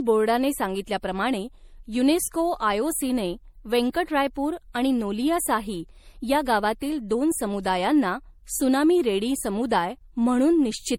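From start to finish the speech carries generation loss, likely from being passed through a lossy MP3 encoder about four times, with the artefacts pointing to roughly 64 kbit/s. Each re-encode quantised on a shifted frame grid, so the errors stacked: the sound is swirly, hollow and smeared, and consonant attacks blur. A spectrogram shows flickering holes and blocky patches across the upper bands, with nothing above 18.5 kHz, and the waveform's transients look softened.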